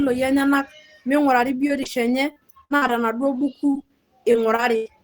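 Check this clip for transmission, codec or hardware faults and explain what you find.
One transmission fault is present: repeated packet loss with a robotic sound, from 1.67 s to 4.88 s. Audio keeps going missing, and each hole is bridged by extending the preceding sound. That leaves a choppy, robotic texture, with holes up to 92 ms long and roughly 12% of the stretch patched over. A single dropout would be one gap; here brief gaps recur throughout.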